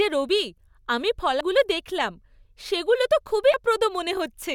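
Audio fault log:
1.41 s and 3.54 s, damaged data in a compressed stream: corrupted bytes made the decoder misread those frames, lose sync and hunt for the next frame header. Each spot gives a brief blip, first between "রবি আমি" and "দেখলাম সেগুলো তো", then just after "দেখলাম সেগুলো তো".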